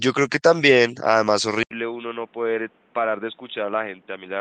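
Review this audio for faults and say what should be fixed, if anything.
Input switched to a poorer device, at 1.63 s and lasting to the end: after a gap of about 80 ms, the sound comes back boxy and dull, with nothing above 3.8 kHz, roughly 10 dB quieter, and over a new background noise only about 30 dB below the signal. The likely cause is the recording changing to another microphone or to a headset's narrowband call profile, since the first part of the clip reaches up to around 12 kHz through the Opus call path. To prevent it, lock the input device for the session and stop the system or headset from switching profiles during the recording.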